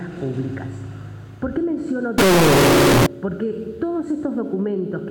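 From 2.18 s to 3.06 s the audio turns into a float read as integer fault: the sound jumps abruptly to a very loud, harsh, buzzy level, with quiet background material coming up as loud as everything else. The likely cause is 32-bit float samples being interpreted as 32-bit integers. On a waveform that stretch becomes a near-square block pinned at an almost fixed, high level, and a spectrogram shows dense broadband energy smeared up to the top of the range.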